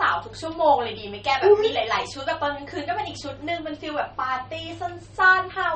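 From start to finish the speech carries plainly audible MP3 compression damage. Nothing comes through above about 8.4 kHz, so the top end sounds dull, and the s sounds go swirly and watery with a metallic edge. That's the encoder running short on bits, cutting the treble and letting weak frequency lines flicker on and off between frames. It likely comes from a low bitrate, something around 32 kbps.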